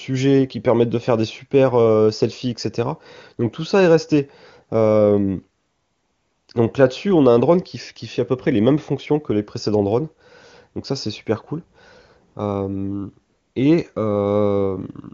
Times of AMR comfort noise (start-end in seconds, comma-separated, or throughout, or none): 5.59-6.47, 12.33-12.35, 13.29-13.55